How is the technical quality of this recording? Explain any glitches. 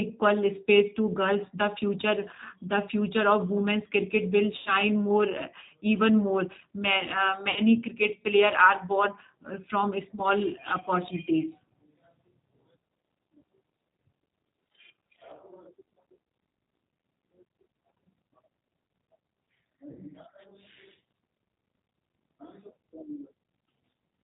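The speech is intelligible but plainly degraded by a low-rate telephone codec throughout, with four short dropouts concealed by that codec.

G.729 codec: The whole clip has no content above 4 kHz and a slightly rough, synthetic texture. This fits the 8 kbit/s G.729 family, which rebuilds speech from a vocal-tract filter, a pitch predictor and a sparse pulse excitation rather than sending the waveform itself.

VoIP packet loss concealed by the speech codec: Gaps appear at 4.58–4.74 s (just after "women's cricket will", about 80 ms lost), 7.50–7.60 s (about 60 ms), 10.15–10.21 s and 19.93–19.98 s (about 20 ms each). The decoder extended its last pitch and filter with falling gain, giving a brief stretched, fading sound that takes a moment to recover.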